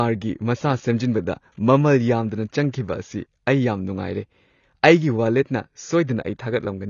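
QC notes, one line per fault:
Throughout: AAC compression. Nothing survives above 7 kHz, so the speech sounds dull and boxed in. Sibilants come out fizzy and smeared, with a watery warble. The likely cause is an AAC-LC encoder starved of bits, which fits about 24 kbps.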